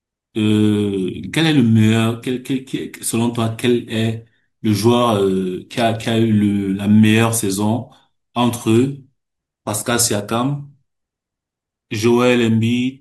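No technical faults are audible anywhere in the recording.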